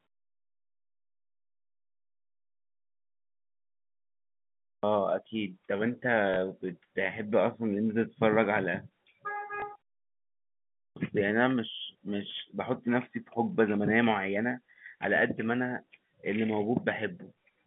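At 4.77 s the sound comes in with a clipped start after a pause: the output had gone to sleep during the opening silence and swallowed about 60 ms before waking. The same thing happens at 10.9 s after a 1.15 s gap, losing roughly 64 ms, so the onset snaps in abruptly. At 6.34 s and again at 9.6 s there's packet loss with the last packet repeated. A 20 ms stretch, which fits a single lost packet, gets replayed. You hear a small blip over the narrow telephone-band sound.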